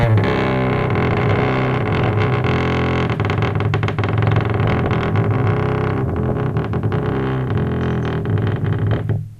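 DAB burbling at 1.12–2.11, 4.12–5.09, 5.83–6.39 and 8.92–9.16 s: reception bit errors corrupt sub-band data, giving short noise blips and level jumps in single sub-bands, seen as flickering isolated blocks on a spectrogram.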